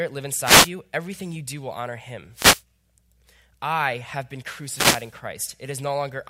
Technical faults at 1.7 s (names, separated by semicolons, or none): none